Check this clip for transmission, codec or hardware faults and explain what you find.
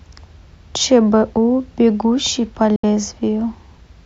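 One fault is present: a digital broadcast dropout in the speech from 2.76 to 2.84 s. The receiver evidently stopped getting valid frames, either losing the signal or failing checksums, and muted until good frames returned. About 72 ms of programme, consistent with roughly three frames, is simply gone. The sound fades out over about 3 ms into a short silent hole and then resumes mid-stream. On a waveform and spectrogram this shows as a clean gap of empty signal across all frequencies, with near-vertical edges.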